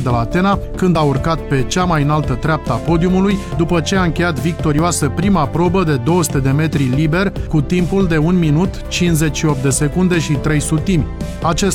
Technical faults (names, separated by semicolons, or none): overlap between stream segments